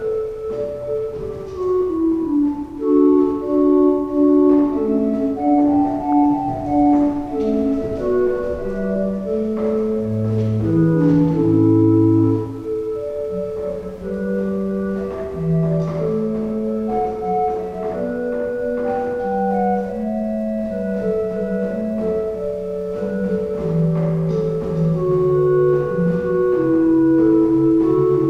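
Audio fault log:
6.01–6.13 s DAB burbling: a brief burst of burbling over the sound lasting about a tenth of a second, with seven MP2 frames hit. Weak reception let a small fraction of bit errors slip past error correction, corrupting samples so single sub-bands got short blips of noise.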